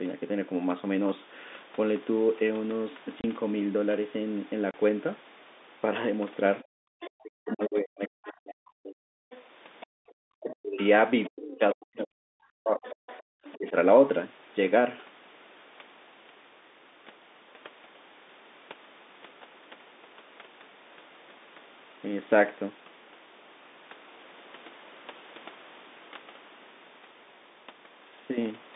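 At 3.21 and 4.71 s, packet loss filled with silence cuts 30 ms holes with hard edges, which fits a single 30 ms packet. These are abrupt gaps, not gradual dips.

From 6.61 to 7.1 s, 9.31 to 9.86 s and 12.77 to 13.53 s, a second voice sits about 20 to 25 dB under the speech. This is likely the other side's voice leaking through past the echo canceller.

During 6.64 to 6.88 s and 9.86 to 10.14 s, background gating by the echo canceller drops the room sound by about 40 dB for a fraction of a second. The room sound returns when the canceller lets go.

From 7.16 to 9.21 s, 10.42 to 12.83 s and briefly at 13.53 to 13.75 s, the talker's own voice sinks by up to about 40 dB. The likely cause is speech suppressed in double talk while the far side spoke.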